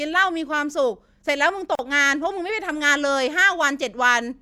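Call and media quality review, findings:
Gap at a join of encoded pieces, 1.75 to 1.79 s: about 38 ms gap dropped into running speech, edges smeared by the codec so the silent part is shorter, then the speech picks up right where it stopped. Probable component: the segment concatenation step. Separately encoded chunks were stitched without trimming encoder start delay and last-frame padding. The joins look to be every 6 s, so only this one lands in the clip.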